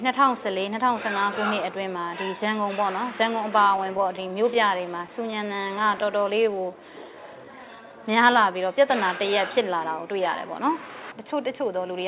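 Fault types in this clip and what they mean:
Repeated stalls (stutter): From 3.64 to 6.04 s the playout ran dry about twenty times, each gap bridged by continuing the last sound, at most 14 ms. About 192 ms was filled with nothing lost, giving audible catches and hiccups rather than the smooth stretching of a slow-down.
Jitter buffer slow-down: Between 5.87 and 7.89 s the receiver repeated single pitch periods to rebuild its reserve, adding 182 ms so the audio runs at 91% speed. The pitch stays put and sounds drag evenly, unlike the broken, jerky rhythm of stalls.
Jitter buffer speed-up: From 9.70 to 11.94 s the buffer shed excess delay by cutting out pitch-period pieces, about 150 ms in all, so the audio runs at 107% speed and feels hurried. Pitch is unchanged, which separates it from simply playing faster.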